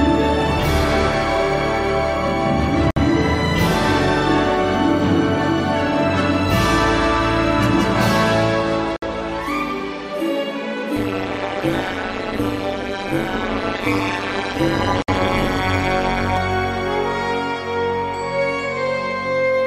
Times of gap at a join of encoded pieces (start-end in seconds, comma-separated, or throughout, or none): 2.91-2.96, 8.96-9.02, 15.02-15.08